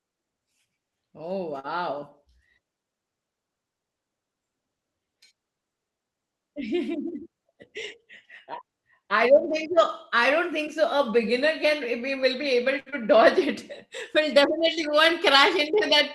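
At 1.59 to 1.67 s a short stall from a late packet occurs. A packet arrived late and the jitter buffer ran dry, so the receiver stretched the last sound by 44 ms and then resumed with nothing lost. It sounds like a briefly held syllable with a faint buzz. On a spectrogram the harmonics run flat and unchanging for that span, and the waveform repeats one cycle shape.

From 7.00 to 7.30 s a jitter buffer speed-up plays the speech at 112% speed. The buffer had built up extra delay, so the receiver cut short pitch-period pieces, roughly 40 ms in all, to catch up. The speech sounds hurried without any pitch change. The waveform shows slightly shortened periodic runs, and the harmonics keep their spacing while the syllables compress in time.

A second late-packet stall runs from 12.80 to 12.89 s, holding the sound for 67 ms. It is a longer frozen patch than the first, heard as a drawn-out, faintly buzzy sustain. 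It shows as flat horizontal harmonic bands on the spectrogram.

Immediately after, from 12.90 to 12.95 s, comes short concealed packet loss. Of the audio, 40 ms never arrived. The receiver filled 18 ms by continuing the previous sound and dropped the rest, which took about 20 ms off the delay. It is heard as a quick smear or wobble. The spectrogram shows blurred, slightly repeated texture and then a blend back into the real audio. All of this sits within a band limited near 12 kHz, consistent with the Opus call codec.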